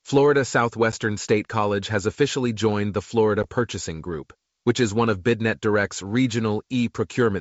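Packet loss on the ADPCM call at 0.92 and 3.43 s leaves hard-edged 10 ms waveform blanks, then brief distortion as the decoder's predictor realigns.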